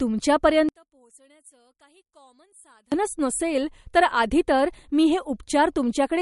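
Speech runs through the whole clip with plainly audible codec damage: a watery, swirling texture, smeared consonant onsets and nothing above about 11.2 kHz. This is likely MP3 compression at a low bitrate, around 48 kbps, where the encoder cuts the treble and lets weak frequency lines flicker on and off between frames. From 0.69 s to 2.92 s the voice nearly vanishes in mono, dropping by about 34 dB to a faint residue. This points to one channel inverted, likely a polarity flip on one side, so the centred speech cancels when the two channels are summed.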